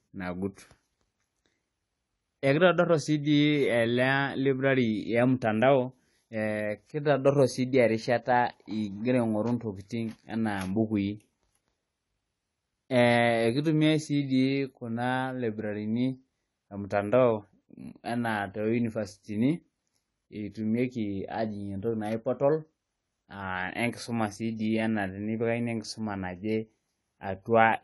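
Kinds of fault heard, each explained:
AAC compression: The speech sounds dull and smeared, with a watery, warbling texture on sustained sounds and a fizzy edge on sibilants, and nothing reaches above 11.5 kHz. This is likely lossy AAC-LC coding at a low bitrate, which fits about 32 kbps: the encoder drops detail it judges inaudible and cuts the top band. On a spectrogram, energy ends at a flat ceiling near 11.5 kHz, with patchy gaps and blotches below it.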